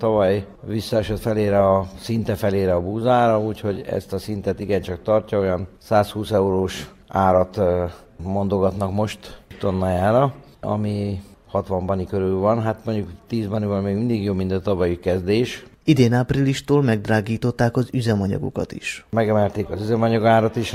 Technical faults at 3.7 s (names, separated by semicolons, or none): clock drift between sender and receiver; repeated timing corrections